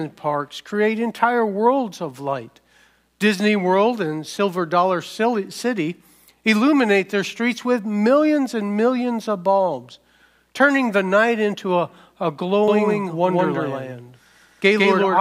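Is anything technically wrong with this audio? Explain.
Yes. From 12.68 s to the end, every sound repeats about 150 ms later at roughly equal loudness, dry and abrupt: a doubled audio track, likely from a second, slower capture path.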